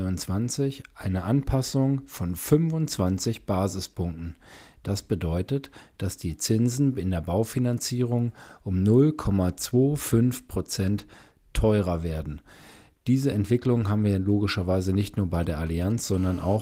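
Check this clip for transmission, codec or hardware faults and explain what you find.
Two interference faults from a nearby 2G handset appear near the end of the speech. The Opus coding, in its hybrid mode, leaves only light traces of its own.

GSM signalling bursts run from 15.34 to 16.16 s, right after "wir logischerweise nicht nur". A phone sending brief radio bursts gets rectified by the audio circuit. Galloping ticks and short buzzes at 217 Hz sit roughly 25 dB below the speech.

GSM phone buzz follows from 16.18 to 16.57 s. The handset now transmits continuously, as in a call, pulsing 217 times per second. The circuit demodulates those pulses into a steady, raspy 217 Hz buzz full of harmonics, about 24 dB below the speech.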